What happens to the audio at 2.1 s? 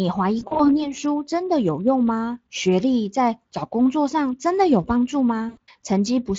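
At 2.1 s the speech is intact, with no dropout, click or other fault at that point.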